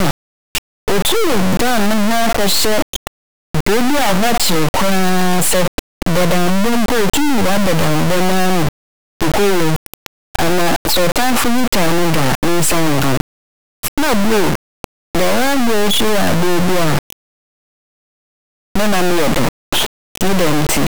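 From start to finish the speech is wrecked by integer read as float. The sound points to 32-bit integer samples being read as 32-bit float values. Samples decode as values that are nearly zero, invalid or far beyond full scale. The output slams between zero and clipping, a harsh, extremely loud buzzing square wave that drops to silence in quiet passages.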